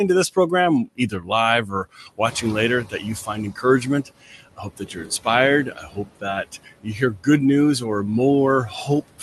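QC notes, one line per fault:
throughout: noise suppressor artifacts. Steady background is pulled down about 18 dB frame by frame, so the noise sinks between the words and rises under them.
0.85–1.3, 1.66–2.44, 2.84–3.05, 4.27–4.41, 4.57–5.26, 5.71–6.25, 6.44–7.27 (ending just before "news or"), 8.68–9.22 s: speech cut by the noise suppressor. Parts of the speech are mistaken for noise and dropped by about 9 to 17 dB, a few hundred milliseconds at most each time, so they sound swallowed.
2.26–3.49 s: noise suppressor catching up. Room noise jumps about 12 dB near 2.5 s. The lagging noise estimate lets it through with only about 13 dB cut, then it sinks over roughly 1.2 s.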